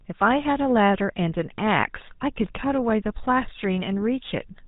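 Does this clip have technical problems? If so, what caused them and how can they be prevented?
Yes. The whole clip carries GSM full-rate codec damage, and it is plainly audible. The speech has a buzzy, gravelly roughness because the codec models the vocal tract and excites it with a sparse, regularly spaced pulse train built from only every third excitation sample. Nothing above 4 kHz gets through, so the sound is dull as well as coarse, consistent with the 13 kbps GSM full-rate codec. To prevent this, carry the audio over a wideband codec such as AMR-WB or Opus instead of legacy GSM.

Clock slip clicks run from 0.23 s to 4.58 s as faint, regular ticks about every 0.15 s, roughly thirty in all, each from a single sample dropped or repeated. They are heard only while speech is present. The likely cause is two devices running on unsynchronised clocks with a mismatch on the order of 150 ppm, so a whole sample of error builds up at that steady interval. 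To prevent this, lock both devices to a common clock or put an adaptive sample-rate converter between them.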